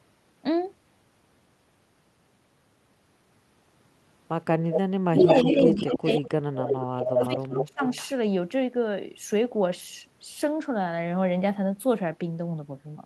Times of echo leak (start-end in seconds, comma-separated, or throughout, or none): 4.71-4.80, 5.17-5.96, 6.69-7.26, 7.55-8.08